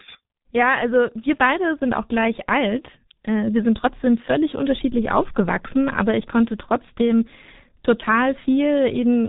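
From start to finish the speech carries heavy G.723.1 codec damage. Nothing gets through above about 3.8 kHz, so it's muffled, and the slow-updating voice model makes it hoarse, with smeared consonants, which fits a bitrate around 6 kbit/s.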